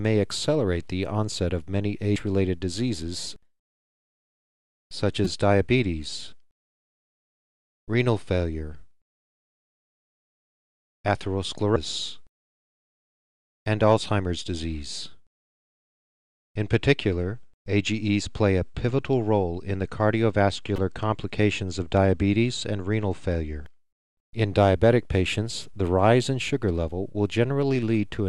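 Short chirps and squawks cut through the sound at 2.16 s, 5.25 to 5.27 s, 11.76 s, 20.76 to 20.79 s and 23.66 s, each lasting between 4 and 26 milliseconds. These are the marks of damaged data in a compressed stream: corrupted bytes made the decoder misread frames, lose sync and hunt for the next valid frame header, producing brief garbled blips.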